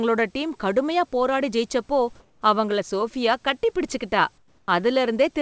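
A short speech clip carried over a call path whose G.722 coding leaves nothing above 8 kHz, with two brief spans of comfort noise in place of the background. From 2.20 to 2.42 s, just after "டீம் கடுமையான போராடி ஜெயிச்சப்போ", the room noise turns smooth and featureless, about 2 dB lower. From 4.38 to 4.68 s, after "கட்டிப்பிடிச்சுகிட்டா", the same happens with a drop of about 7 dB. The likely cause is discontinuous transmission, where the receiver synthesises noise during pauses.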